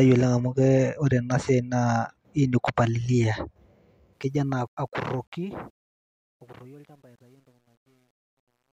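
From 4.13 s to the end at 8.78 s, the speech fades out, and that fade carries truncation distortion. The gain stage rounds each sample to a coarse step with no dither, which points to a path holding only about 10 bits. As the level drops, the waveform collapses into a few square steps. The tail grows gritty. From 5.9 s to 8.78 s it is worst.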